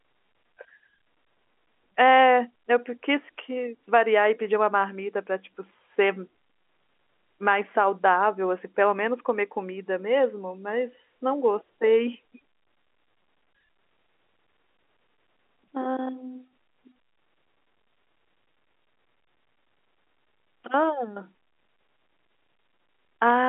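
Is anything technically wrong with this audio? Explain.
No, this is speech over G.711 telephone coding, consistent with a 64 kbps A-law line, and its lack of anything above 3.8 kHz is that channel working as designed.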